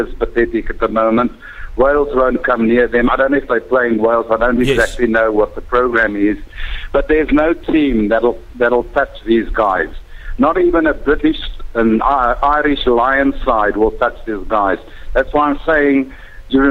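No technical faults can be heard anywhere in the audio. There is nothing to mark at any point in time.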